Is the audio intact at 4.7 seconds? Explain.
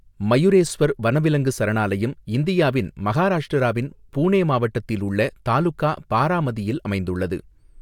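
Yes, the audio is intact at 4.7 seconds, with no audible fault at that moment.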